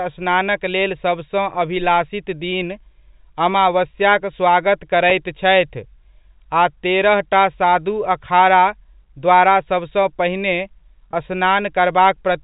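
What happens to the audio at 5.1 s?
Right after "अमावस्याक स्वागत", at 5.1 s, a brief packet loss with pitch repetition occurs. About 10 ms of audio, consistent with a single lost packet, is missing, and the receiver fills the gap by repeating the last pitch period, so the sound briefly holds with a faint buzzy quality.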